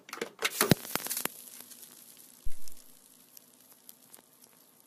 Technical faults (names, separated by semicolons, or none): phantom power thump